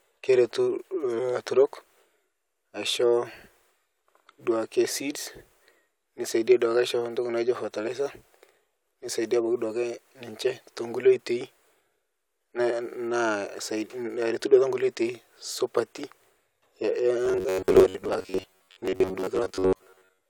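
From 17.26 s to the end at 20.29 s, the speech turns into robotic sound from repeated short buffers. It is likely that new audio arrived too rarely and the gaps were filled by replaying the last short slice. Most of the real audio in this stretch is skipped. The replays recur every 10.7 ms or so, imposing a fixed buzz at 93.8 Hz. The speech becomes a rigid, metallic buzz that only loosely tracks the words.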